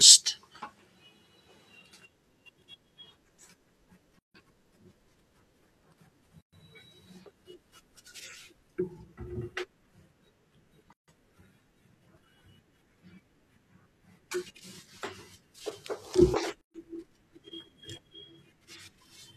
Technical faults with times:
4.19-4.34 gap at a join of encoded pieces
6.41-6.53 gap at a join of encoded pieces
10.93-11.08 gap at a join of encoded pieces
16.61-16.74 gap at a join of encoded pieces

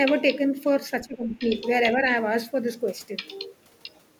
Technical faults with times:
1.06-1.45 speech suppressed in double talk

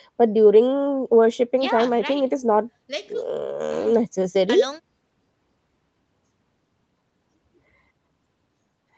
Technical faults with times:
none

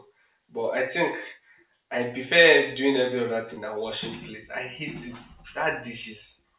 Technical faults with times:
3.54-3.59 short concealed packet loss

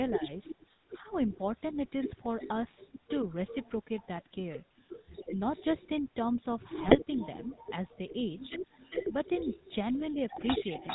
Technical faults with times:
0.00-10.94 DC offset
0.00-10.94 GSM full-rate codec
0.13-1.76 echo leak
0.18-1.04 speech suppressed in double talk
1.36-1.40 GSM bit errors
2.40-2.89 echo leak
3.47-4.07 echo leak
6.61-9.98 echo leak
6.86-6.97 GSM bit errors
10.35-10.42 GSM bit errors
10.73-10.94 echo leak

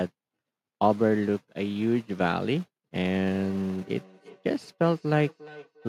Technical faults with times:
2.96-5.88 feedback echo between two devices

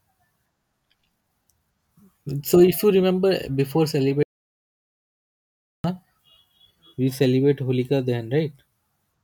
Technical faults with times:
4.23-5.84 audio dropout to silence

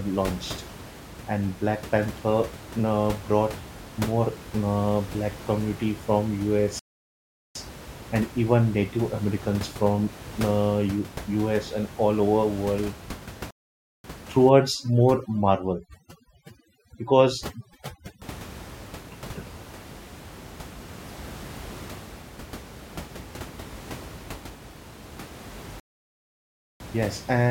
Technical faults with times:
6.79-7.55 playback stall
13.51-14.04 playback stall
14.49-18.22 overdone noise removal
25.80-26.80 playback stall

